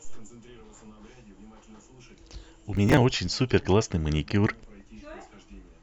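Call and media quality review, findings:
Processor overload crackle, 2.77–3.01 s: a burst of gritty tearing from about fifteen skipped buffers of around 10 ms each. Local CPU, not network loss: hard-edged skips, no concealment smearing.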